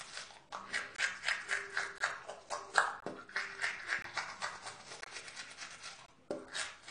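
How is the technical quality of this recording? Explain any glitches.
The technical quality is compromised by two faults: a dull, band-limited codec sound throughout and a string of regular dropouts.

AAC compression, throughout: nothing above 10.2 kHz, with plainly audible smeared, fizzy detail, likely from AAC-LC coding at a low bitrate, around 32 kbps.

Gap between chunks, at 0.96–0.98, 1.98–2.00, 3.00–3.02, 4.02–4.04, 5.04–5.06 and 6.06–6.08 s: 20 ms silences inserted between 1.0 s chunks, heard as short holes.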